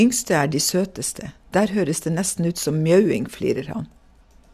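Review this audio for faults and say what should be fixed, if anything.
No faults heard; nothing needs fixing.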